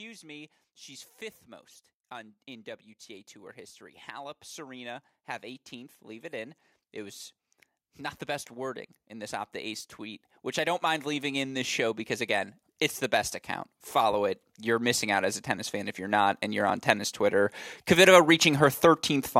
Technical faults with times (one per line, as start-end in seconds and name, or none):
0.05-7.25 automatic gain rising
7.97-12.57 automatic gain rising
13.91-19.15 automatic gain rising